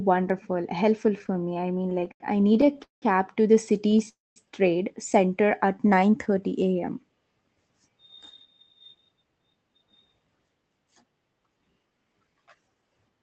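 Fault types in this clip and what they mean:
Repeated stalls (stutter): Late packets kept emptying the jitter buffer, so the speech halts in 23 short gaps filled with stretched sound, the longest 190 ms, before "to the".
Call audio freeze: Speech stops for about 0.27 s, mostly silent, between "to the" and "trade center", likely from packets held up in transit.
Jitter buffer slow-down: After "trade center" the receiver repeats pitch periods to rebuild its reserve. Speech drags at 86% speed with unchanged pitch.
Jitter buffer speed-up: From 8.72 s to the end, small pieces are cut to shrink the delay. Speech runs hurried at 111% speed, same pitch.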